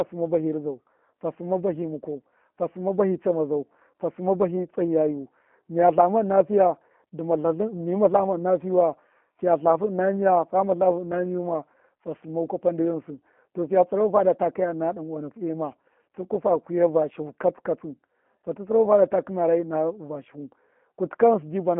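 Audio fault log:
throughout G.729 codec: speech rebuilt from a few pulses per frame, fitting an 8 kbit/s stream, sounds plainly rough and synthetic, held within 200 Hz to 3.4 kHz.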